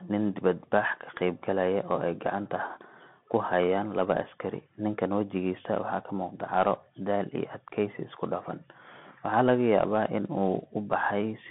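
Throughout the speech, the Bluetooth CVSD headset codec confines the sound to a 150 Hz to 3.4 kHz band. Its one-bit up-or-down coding, which fits a 64 kbps link, lags on loud, fast rises. That makes s sounds scratchy over a granular hiss, unlike a clean telephone band-limit.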